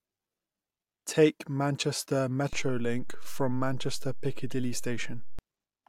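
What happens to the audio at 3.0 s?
At 3.0 s you're inside a DC step that runs from about 2.53 s to 5.39 s. The waveform's zero line jumps by about -29 dBFS and stays shifted, so there's a low thump at 2.53 s and another at 5.39 s when it drops back, while the speech carries on unaffected.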